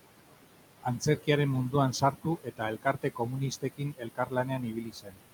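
It's a short speech recording with room noise sitting about 14 dB under the talker, and a noise suppressor is working hard on it the whole way through. You can hear noise suppressor artifacts everywhere: the background gets pulled down by about 18 dB in the gaps and swells back up under the speech. The suppressor is also cutting speech in four stretches: 0.83 to 1.28 s, 2.0 to 2.61 s, 2.83 to 3.33 s, and 3.51 to 5.25 s. It's mistaking softer parts of the speech for noise and ducking them along with the background, by about 14, 16, 16 and 19 dB at the deepest. In the first three stretches only a short bit, roughly 150 to 200 ms each, actually goes under. The last stretch is the worst, with around a second of it sounding swallowed and faint.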